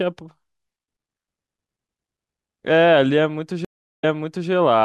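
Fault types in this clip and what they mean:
Stream reconnect: the dropped connection forced a fresh decoder mid-stream; speech cuts out for 380 ms at 3.65 s, then resumes 0.47 s earlier, repeating.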